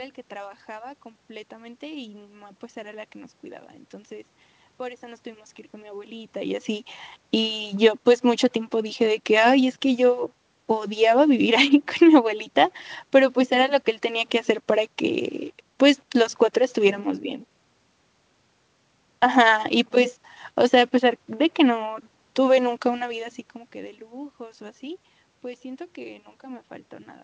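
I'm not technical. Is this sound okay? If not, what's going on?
Yes, nothing is wrong with the system: the background noise is just the room, the level shifts around 6 s and 23 s are the talker moving relative to the microphone, and the muffled top end is the normal 8 kHz limit of a G.722 call link.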